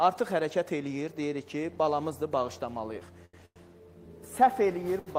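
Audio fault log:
3.25–3.36 s, short stall from a late packet: A packet arrived late and the jitter buffer ran dry, so the receiver held the last sound for about 80 ms with a faint buzzy smear, then resumed where it left off. Nothing is lost, but the audio drops 80 ms behind.
3.45–3.59 s, call audio freeze: The sound hangs as a fading buzz and then goes silent for about 60 ms, about 103 ms of filler in all, before continuing from the same point. The likely cause is packets held up in transit emptying the jitter buffer. Nothing is skipped, but another 103 ms of delay is added.
5.00–5.09 s, short stall from a late packet: Again a packet missed its playout time and the buffer underran, so the last sound is stretched by about 65 ms with a slight dip before normal playback returns. No audio is missing, and the delay grows by 65 ms.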